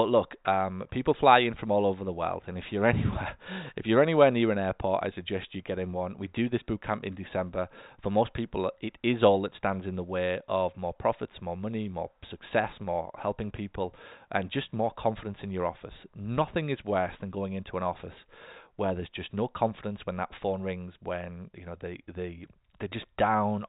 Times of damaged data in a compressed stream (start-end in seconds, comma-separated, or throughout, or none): none